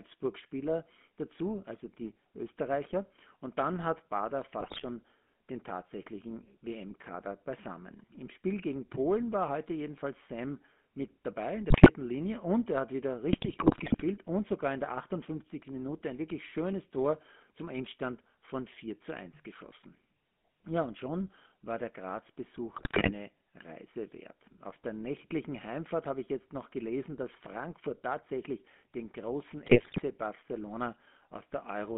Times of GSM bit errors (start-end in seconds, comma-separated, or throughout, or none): 4.60-4.85, 11.70-11.91, 13.33-14.01, 22.74-23.12, 29.66-30.03